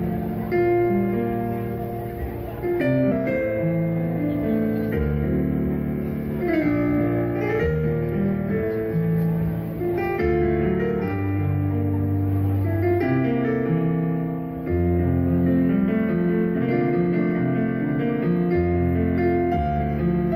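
At 3.11 s there is a skip ahead. Roughly four tenths of a second of audio was dropped, either in transit or by a jitter buffer that overflowed while later audio was already queued, and playback jumps straight to that later material with no gap filled in. The two sides meet almost directly, so the sound lurches forward abruptly. A waveform shows a splice with no silence and a sudden change of envelope. A spectrogram shows a vertical seam where the harmonic patterns fail to line up.

From 7.67 to 8.65 s a jitter buffer speed-up follows, as the receiver sheds the extra delay it had built up. It cuts short pieces one or a few pitch periods long, many times in a row, removing about 50 ms in total. The sound therefore runs at 105% speed at an unchanged pitch and feels slightly hurried. On a spectrogram the harmonics stay at the same frequencies while events crowd closer together in time. The waveform shows periodic cycles trimmed at the joins.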